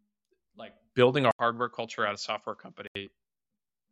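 At 1.31 s, right after "like building a", the speech drops out for 80 ms. It returns duller and about 10 dB quieter, with nothing above 7.6 kHz and faint new noise well below it. The input likely switched to a poorer device. Full quality returns at 2.95 s.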